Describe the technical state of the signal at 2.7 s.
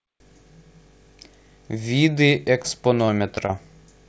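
A brief smear just before 2.7 s, from 2.62 to 2.66 s, is short concealed packet loss. About 20 ms of the call arrived too late to decode, and the receiver patched roughly 18 ms of it by extending the preceding sound before blending back into the real signal.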